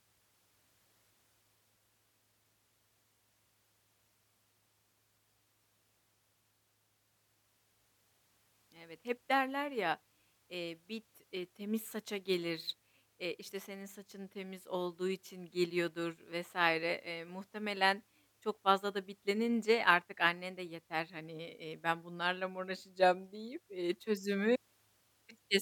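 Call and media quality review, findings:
No technical faults found in the speech signal: levels, continuity and timing hold steady throughout, with nothing to attribute to the capture, transport or playback path.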